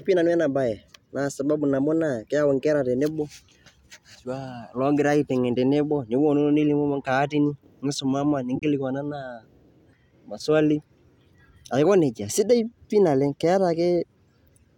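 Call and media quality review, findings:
Corrupt frame muted, 8.56–8.63 s after "nkaatini nisomama": abrupt 76 ms silence, consistent with about three rejected frames. Decoder dropped them; hard silence, not concealment fill, timing intact.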